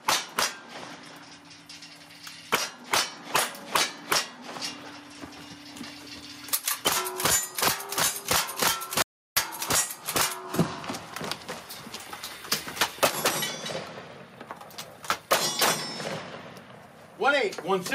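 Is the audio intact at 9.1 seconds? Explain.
No. From 9.02 to 9.37 s the audio drops out to silence for about 345 ms, so nothing at 9.1 s survives. This is an audio dropout to silence, likely caused by the input being lost while the recorder kept writing silence. The gap is dead silence with no room tone, cut in abruptly rather than faded. That sets it apart from a natural pause, which still carries the room's background.

Gain pumping also runs through the whole clip, including the audio either side of the gap. Loud and soft parts are squashed closer together in level, with a gain swing of roughly 15 dB, likely from gain set far too high and a fast limiter clamping it. A noise gate would do the opposite and pull the background down in the gaps.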